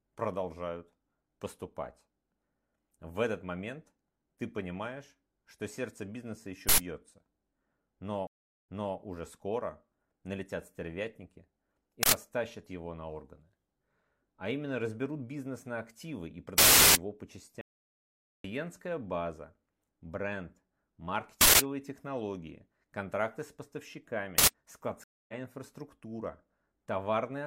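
At 6.69 s there's a harsh burst of digital noise lasting about 93 ms, an uninitialised buffer: leftover memory played as audio, which fits a 4096-sample block. At 8.27 s a stream reconnect drops 373 ms to silence, then the sound restarts 325 ms earlier on "уже скоро налетят стервятники" with a fresh decoder. More uninitialised-buffer bursts hit at 12.03 s (93 ms) and 16.58 s (370 ms, fitting a 16384-sample block). From 17.61 to 18.44 s the audio drops out to dead silence for 830 ms, likely from a lost input, returning on "база бренд". Further bursts come at 21.41 s (186 ms, before "технологии контракты с") and 24.38 s (93 ms). A second reconnect at 25.04 s goes silent for 245 ms and picks up roughly 200 ms further on.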